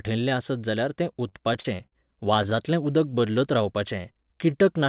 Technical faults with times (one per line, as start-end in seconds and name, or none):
1.04-1.94 repeated stalls (stutter)
3.09-4.52 jitter buffer slow-down